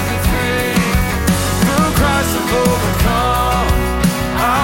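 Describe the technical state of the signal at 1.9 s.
At 1.9 s the signal is intact, with no audible dropout, distortion, glitch or other fault.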